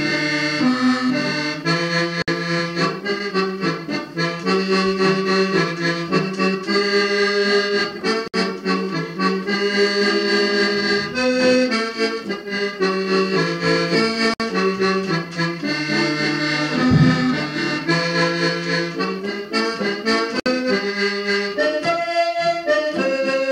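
Short silences of about 60 ms cut into the sound at 2.22, 8.28, 14.34 and 20.40 s. They are gaps at joins of encoded pieces, each carrying encoder delay and padding.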